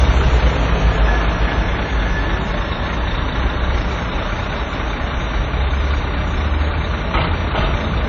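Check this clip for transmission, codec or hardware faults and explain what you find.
One codec fault runs through the whole clip: WMA compression, and the damage is plainly audible. Nothing remains above 7.5 kHz, and what is left sounds ringing and washy, with a hiss that swells and fades with the signal. The likely cause is a transform encoder using long blocks, which smears quantisation noise over tens of milliseconds and zeroes weak components. This fits a low bitrate around 32 kbps and an early WMA encoder. A spectrogram shows a hard ceiling at 7.5 kHz, blurred, patchy energy below it, and soft noise halos around onsets in the waveform.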